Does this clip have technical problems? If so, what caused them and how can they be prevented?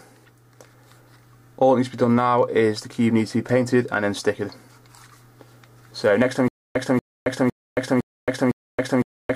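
Yes. A stutter with silent gaps starts at 6.48 s and runs to the end of the clip. A burst of about 235 ms repeats five times, each followed by about 273 ms of silence, so the cycle returns every 508 ms. This is likely a stalled player or stream: each retry replays the last fragment it held and then runs dry, and the audio meant for that stretch never plays. Preventing it takes enough buffering and a steady, sufficient data supply during playback or capture, so the stream never runs empty.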